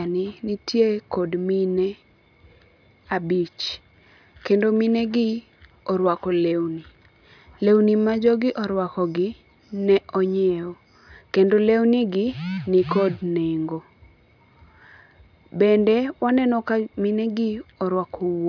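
Nothing in this recording of speech stood out as a technical problem on listening.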